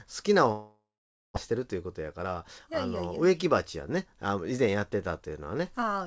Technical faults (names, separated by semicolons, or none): long network dropout; jitter buffer speed-up